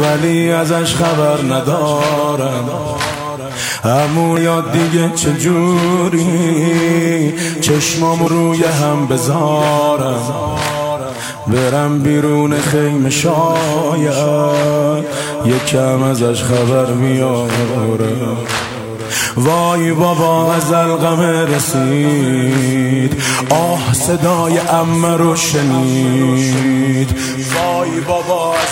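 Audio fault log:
4.37 s and 8.27 s, dropped buffer (overrun): the capture side likely fell behind, so the hardware overwrote samples the program had not yet read, and each lost stretch was simply cut out with the neighbouring audio butted together. There is no gap of silence. Instead, each point is marked by an abrupt jump forward in the sound, skipping roughly a fifth of a second at 4.37 s and about a tenth of a second at 8.27 s.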